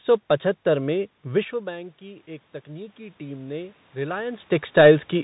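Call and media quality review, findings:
Bluetooth CVSD headset codec, throughout. Band ends near 3.8 kHz. Scratchy sibilants, granular hiss under speech. One-bit delta coding at 64 kHz sampling, which fits a 64 kbps link, where the adaptive step lags fast peaks.

Automatic gain rising, 1.5 to 4.56 s, starting just after "सौ पचहत्तर में". Speech and background swell together by about 6 dB. The talker apparently moved away, dropping input about 14 dB, and the AGC slowly compensated.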